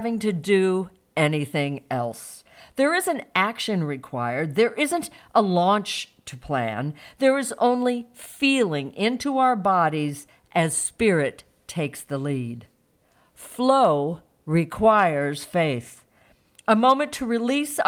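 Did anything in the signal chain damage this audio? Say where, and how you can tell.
No, nothing in the signal chain has audibly damaged this speech recording. No stage from capture through to playback leaves any mark that can be heard.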